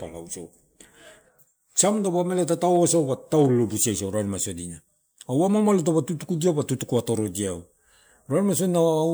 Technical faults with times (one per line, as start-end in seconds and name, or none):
none